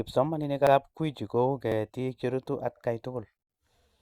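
At 0.67, 1.72 and 2.77 s you get a little stutter, a quick doubled bit of the speech with a click-like edge, and that's overlapping chunks. The audio went through in 1 s pieces, but each new piece started 50 ms before the previous one had finished, so those 50 ms play twice at every join. The extra 50 ms per join is why the repeats land about 1.05 s apart.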